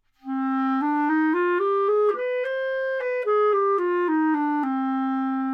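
Nothing in these everyday sounds catches the ear as a technical fault; there's no glitch or hiccup anywhere to point to.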